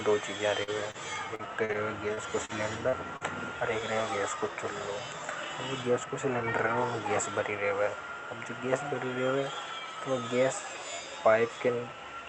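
Right after "दो चीजा", from about 0.63 to 3.24 s, there's repeated packet loss giving that robotic sound: roughly nine short dropouts, the longest about 41 ms, each patched by stretching the previous bit. It turns choppy, with about an eighth of that stretch filled in.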